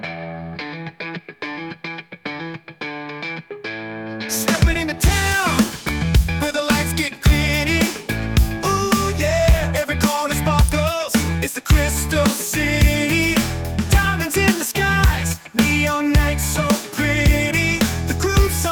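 A sharp, isolated snap cuts through the audio at 5.88 s, peaking around -5 dBFS, and a second, somewhat quieter snap follows at 10.69 s. Each lasts no more than a few milliseconds and sits on top of the underlying sound rather than interrupting it. These are likely electrical switching spikes, where a nearby switch, motor or static discharge arcs briefly and the audio line picks up that burst of interference as a click.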